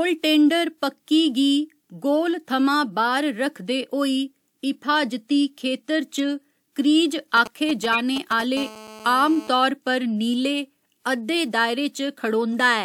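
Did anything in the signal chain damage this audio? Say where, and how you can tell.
Yes. Corrupt frame decoded at 6.16–6.23 s and 7.92–8.00 s: short bursts of misplaced energy peaking near −20 and −10 dBFS, each lasting about one or two frames' worth. This points to a codec stage where flipped bits were played anyway, putting energy at wrong frequencies.

GSM signalling bursts from 7.37 to 8.42 s: a galloping dit-dit-dit of brief 217 Hz buzzes, roughly 10 dB below the speech. A nearby 2G phone's intermittent radio bursts were rectified in the analogue wiring or input circuitry.

GSM phone buzz from 8.57 to 9.49 s: a steady, raspy 217 Hz buzz rich in harmonics, about 18 dB below the speech, consistent with a phone in an active call. The analogue audio circuit demodulated its 217 Hz transmit bursts.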